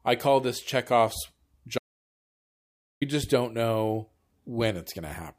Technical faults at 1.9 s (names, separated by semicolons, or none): audio dropout to silence